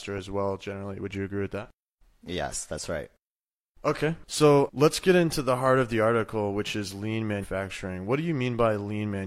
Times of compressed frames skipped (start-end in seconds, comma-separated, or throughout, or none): 7.39-7.46